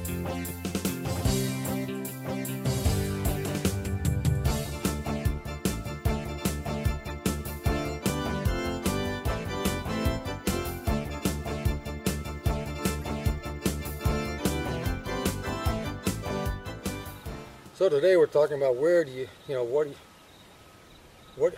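A corrupt frame decoded at 4.80 to 4.83 s. Bits in a compressed frame were damaged, and the decoder played it anyway. Misread values put energy at wrong frequencies. It spans about two frames. The same fault returns at 7.06 to 7.10 s, again over about two frames. At 13.02 to 13.04 s it covers about three frames, and is a little quieter. At 14.38 to 14.40 s it hits about one frame. Each is a brief, out-of-place sound lasting a few hundredths of a second.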